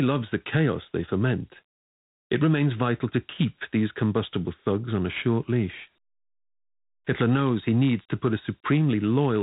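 A gritty hiss trails the speech throughout, with nothing above 3.9 kHz: Dialogic VOX ADPCM damage, consistent with 4-bit coding at 8 kHz, about 32 kbps.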